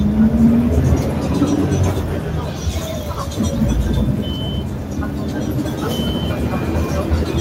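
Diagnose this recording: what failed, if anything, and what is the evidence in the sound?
A call-processing stage failed: a noise suppressor built for speech was left running, so this noise suppressor applied to music or sounds misreads sustained, steady content as noise and pulls it down. Throughout the recording, sharp onsets pass intact while held portions and decays sag by about 5 dB, giving an audible pumping and thinning. On a waveform the envelope dips shortly after each transient; a spectrogram shows ambience and tails fading in flickering patches rather than decaying smoothly.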